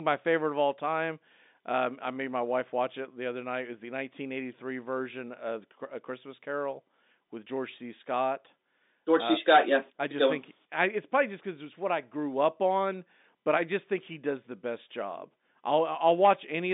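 Speech carried over an ordinary G.711 telephone line, with nothing technically wrong with it.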